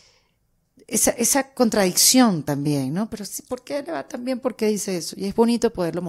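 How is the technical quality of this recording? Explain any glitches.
The technical quality of the recording holds up, with no glitches to explain.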